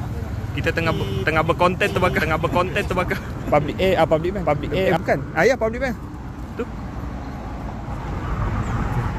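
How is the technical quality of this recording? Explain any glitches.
The recording has one glitch. A doubled audio track runs from 1.89 to 4.97 s. A second, full-band copy trails the original by about a second, roughly 5 dB quieter, with no room colour. It likely comes from a slower capture path adding a duplicate, and it switches in and out abruptly.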